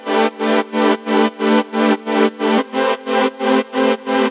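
No faults can be heard: the sound comes through an ordinary call path whose telephone-band coding leaves nothing above 4 kHz, which fits a 64 kbps G.711 mu-law codec.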